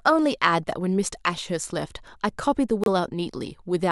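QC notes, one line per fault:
2.84–2.88 s, corrupt frame decoded: there's a short burst here, about 40 ms, that comes across as a harsh squeak-like blip peaking around -5 dBFS. A few consecutive compressed frames arrived with damaged bits, and the decoder played them rather than concealing them. The misread codes and gains dumped energy into frequency bands where it doesn't belong, so you get a noisy chirp that lasts about as long as the bad frames.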